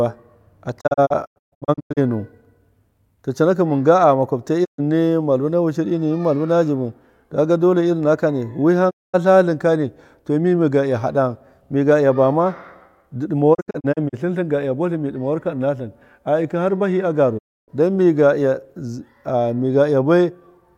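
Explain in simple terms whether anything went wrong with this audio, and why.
The speech suffers a digital broadcast dropout, going briefly silent at 0.80–1.99 s (several short holes), 4.64–4.80 s, 8.89–9.16 s, 13.53–14.15 s (scattered holes) and 17.37–17.70 s. The receiver muted with a quick fade rather than stuttering or warbling, and that muted stretch of speech is simply gone.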